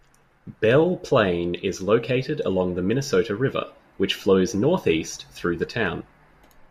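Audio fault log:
No faults heard in this speech recording.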